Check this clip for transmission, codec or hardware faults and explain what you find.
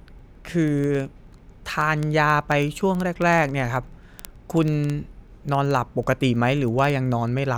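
A clocking fault runs through the speech: word clock ticks from 0.14 s to 7.55 s. The receiver runs unlocked, drifting about 400 ppm from the sender, so roughly every 50 ms one sample is dropped or repeated. This produces around 150 sharp ticks of uneven strength at a steady rate.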